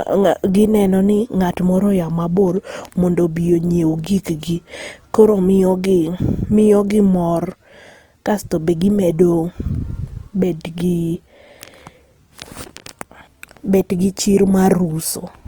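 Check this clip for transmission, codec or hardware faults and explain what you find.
One codec fault runs through the whole clip.

Opus compression, throughout: the sound is grainy and rough, consistent with Opus likely running in its CELT music mode at a rate around 24 kbps. With bits this scarce, it fills each band's energy by folding lower bands or injecting noise rather than leaving holes, so detail turns coarse. The bandwidth stays full, reaching about 20.2 kHz.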